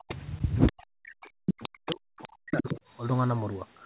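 Speech suppressed in double talk, from 0.00 to 0.08 s: the talker's level plunges by roughly 40 dB for a brief instant, while a second voice is also present. This is likely an echo canceller turning both talkers down because it cannot tell the near talker from loudspeaker echo. From 0.72 to 2.67 s the same dipping returns repeatedly, adding up to about one and a half seconds of gaps and deep drops, again near 40 dB at worst.

Other side's voice leaking through, from 0.00 to 0.16 s and again from 0.56 to 0.72 s: a fainter second voice sits around 15 dB below the talker. It is likely the far end played on the device's loudspeaker and not fully removed by echo cancellation before reaching the microphone. From 1.21 to 2.81 s it is far stronger, only about 5 dB under the talker. It overlaps the suppression, so the two voices compete while the talker keeps cutting out. The whole clip is narrowband, with nothing above 4 kHz, which fits a G.711 call codec.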